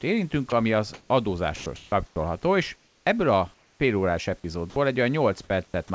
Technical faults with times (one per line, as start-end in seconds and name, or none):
0.50 sound dropped by the voice detector
0.94-1.10 comfort noise in place of the background
1.56-2.16 sound chopped by the voice detector
2.76-3.06 comfort noise in place of the background
3.54-3.80 comfort noise in place of the background
4.70-4.76 sound dropped by the voice detector
5.66-5.90 sound chopped by the voice detector